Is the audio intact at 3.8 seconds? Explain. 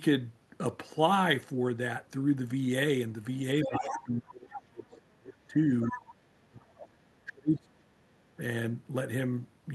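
No. At 3.8 seconds two problems overlap. From 3.64 to 4.01 s there's the other side's voice leaking through, a second voice sitting roughly 10 dB under the talker. It sounds like the far end's audio came out of the talker's loudspeaker, got picked up by the mic, and wasn't fully cleaned out by the echo canceller. So you get a quieter, separate voice underneath that doesn't belong to this side of the call.

Right on top of that, from 3.67 to about 5.57 s, you get speech suppressed in double talk. Both ends were talking at once, and the echo canceller most likely couldn't tell its own talker apart from the loudspeaker echo, so it pulled everything down. The talker's level sags hard, dropping by something like 30 dB at its worst, for nearly two seconds before recovering.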